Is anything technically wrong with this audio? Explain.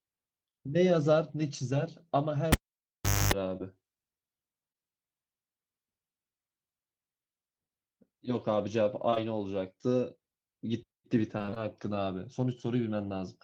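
Yes, there are three kinds of fault. From 2.52 to 3.34 s there's a cable pulled and plugged in: a pop, about 0.76 s of near silence with a 0.26 s burst of 50 Hz mains buzz from the tip touching, then another pop. Short concealed packet loss hits at 3.57, 4.72, 9.10 and 9.14 s. In each case about 20 ms of audio never arrived and was patched by extending the previous sound, so you hear brief smears or wobbles. From 11.38 to 11.58 s there's repeated packet loss with a robotic sound: five gaps in quick succession, with roughly half that stretch filled in, which makes the speech choppy.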